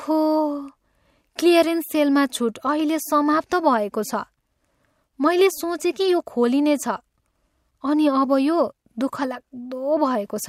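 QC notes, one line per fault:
No technical faults are present; the signal carries the speech at steady level with no interruptions, distortion or added noise.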